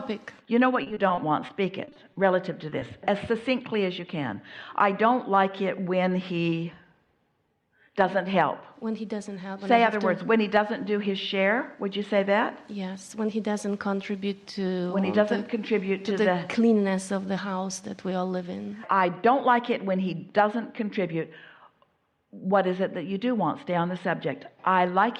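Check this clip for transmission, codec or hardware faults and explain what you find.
Three transmission faults appear early in the clip, all from lost packets.

Repeated packet loss (robotic sound) runs from 0.83 to 2.18 s. Ten short gaps fall within that span. The longest lasts 30 ms. Each time, the receiver patches the hole by stretching the last sound it received. The next gap follows soon after. About 16% of the stretch is filled this way. The sound turns choppy, with small pieces missing.

Short concealed packet loss follows twice, at 2.70 to 2.85 s and again at 2.80 to 2.84 s. In each case, about 20 ms of audio never arrived in time. The decoder bridges the gap by extending the preceding sound and then blending back into the real signal. The first adds about 7 ms. It sounds like a brief smear or wobble. A short sound inside the gap can drop out.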